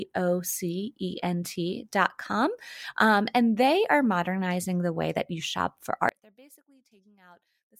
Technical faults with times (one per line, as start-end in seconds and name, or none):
6.09-7.79 one channel inverted